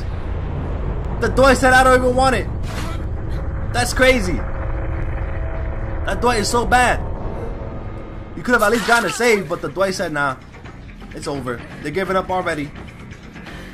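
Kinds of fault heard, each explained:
Overlap between stream segments: overlapping segment timestamps make the player discard 10 to 20 ms of real audio, producing a tiny skip about every 2 s, 1.05 to 11.02 s.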